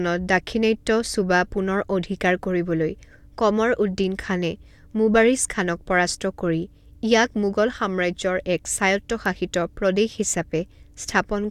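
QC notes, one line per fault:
No faults heard in the speech on this pass; nothing to log.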